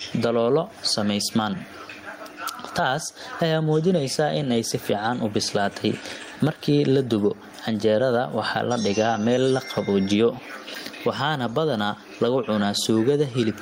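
Gain pumping runs throughout the speech, with the level swinging around 15 dB, likely from excessive gain hitting a fast limiter.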